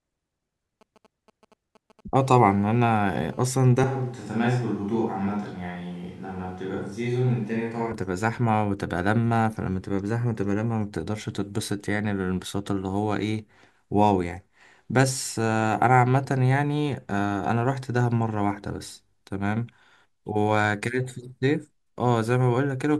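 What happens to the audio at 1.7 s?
GSM signalling bursts from a nearby 2G phone, rectified by the audio circuit, add a faint galloping dit-dit-dit of short 217 Hz buzzes from 0.81 to 2.01 s.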